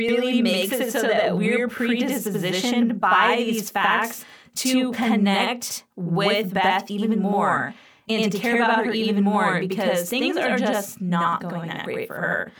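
Channel delay (doubling) runs through the whole speech recording. One channel lags by about 85.3 ms, which fits a 4096-sample buffer. Summed to mono, it sounds like an equal-level slap echo.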